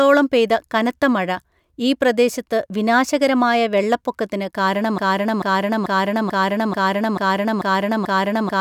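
From the start, the speech carries sample clock jitter: the converter's timing wanders by around a microsecond or two, so each sample lands slightly early or late. That leaves a fine hiss roughly 45 dB below the signal, growing on loud, bright sounds and vanishing in pauses, unlike steady background noise.

At 4.98 s, right after "ഈ പ്രദേശത്ത് വിനാശകരമായ വെള്ളപ്പൊക്കത്തിന്", a broken-record loop begins. A 0.44 s fragment repeats identically eight times until the clip ends, likely because the playback or stream stalled and kept resending its last buffer. Unlike an echo, the repeats never fade, and nothing new follows.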